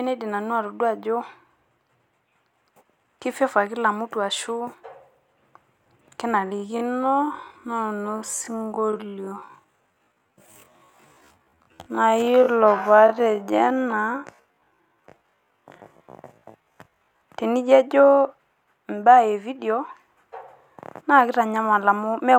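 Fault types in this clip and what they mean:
Time-stretched section: from 6.38 s to 17.2 s the speech slows abruptly to half its pace while pitch stays put, so it drags. This likely comes from software lengthening the audio by repeating short pieces to fill time without shifting pitch.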